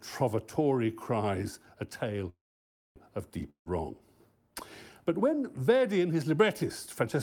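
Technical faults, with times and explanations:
2.29–2.98 s, call audio freeze: after "cries a tale" the sound stalls, mostly silent for about 0.6 s, then resumes intact, likely from a jitter buffer running empty while packets were delayed.
3.50–3.68 s, long network dropout: after "cries a tale of" a short fading fill gives way to silence, and about 0.16 s of audio never returns, likely lost packets.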